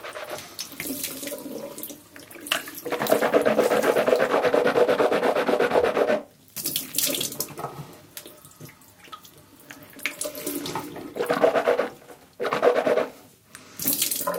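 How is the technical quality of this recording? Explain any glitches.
The technical quality of this recording is good, and there are no glitches to explain.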